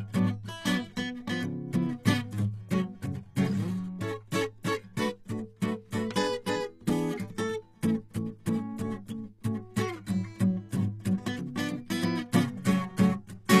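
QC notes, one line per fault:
Throughout: HE-AAC compression, plainly audible across the music. The treble sounds bright but false. The top end has a gritty, metallic sheen, and its harmonics do not sit in line with the lower range. The likely cause is spectral band replication. The codec keeps only the lower spectrum and rebuilds the treble by copying lower bands upward under a coarse envelope. The damage level fits a very low bitrate, around 24 kbps.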